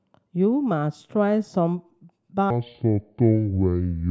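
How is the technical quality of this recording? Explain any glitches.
The recording has one clear glitch: a section at the wrong speed from 2.50 s to 4.10 s, the end of the clip. The speech slows to 0.611 times its recorded rate and drops about ten semitones, likely because that stretch was played against the wrong clock. Because tempo and pitch fall together, it sounds deep and dragging rather than merely lowered, which is how it differs from a pitch shift or time-stretch.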